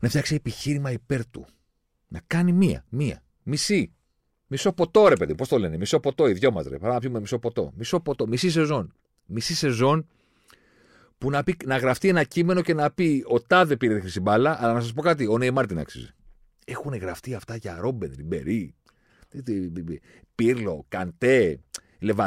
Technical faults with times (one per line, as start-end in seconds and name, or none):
none